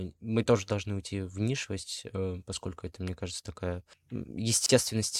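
At 4.66 s there's a gap at a join of encoded pieces: a gap of about 31 ms where separately encoded chunks were butted together untrimmed, then the speech picks up where it stopped.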